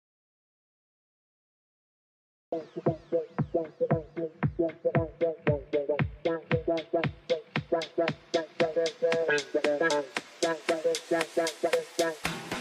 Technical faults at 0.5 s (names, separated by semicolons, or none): audio dropout to silence